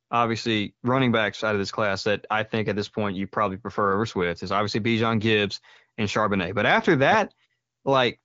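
Nothing stood out on listening to this speech recording.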